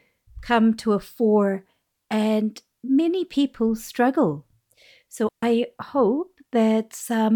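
At 5.29 s the speech cuts out and returns at 5.43 s. This is a digital wireless dropout. The radio link lost too much data to rebuild the audio. The receiver muted instead of playing corrupted sound. The gap lasts about 139 ms. It is a clean hole of near silence. The fade into it is very short. No hiss, crackle or noise burst comes before or after it.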